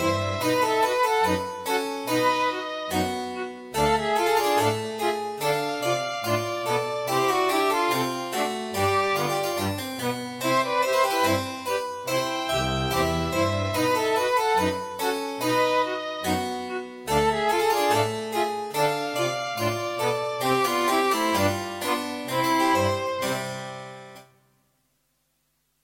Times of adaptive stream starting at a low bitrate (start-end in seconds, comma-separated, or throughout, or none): none